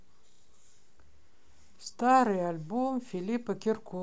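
At 0.32 s and 1.76 s the speech stutters from a repeated buffer. New audio arrived late, so a 32 ms slice, fitting a 512-sample buffer, plays four times and then twice, with hard joins. Unlike a dropout, there is no silent gap, just a brief stammer.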